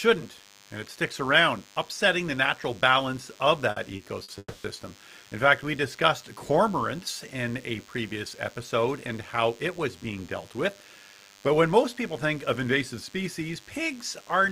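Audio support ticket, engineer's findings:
DECT cordless phone buzz throughout: steady thin 100 Hz buzz, about 30 dB under speech, harmonic-rich. A nearby DECT base's 10 ms bursts are rectified in the audio path. This is not 50/60 Hz mains hum.

Short stall from a late packet at 3.71 s (after "the natural balance of"), 3.96 s and 4.23 s: sound held 30–50 ms. The jitter buffer ran dry and stretched the last sound. Nothing is lost, unlike packet loss.

Call audio freeze at 4.38–4.66 s: last sound held 260 ms, fading, with about 40 ms of silence. Likely packets held up in transit emptied the jitter buffer. It is longer than the stalls, and the audio resumes intact.

Jitter buffer speed-up at 9.79–11.47 s, between "episode and how it" and "when most people think": speech 2% faster, about 50 ms trimmed in pitch-period pieces to cut backlog. Pitch is unchanged, unlike a resampling error.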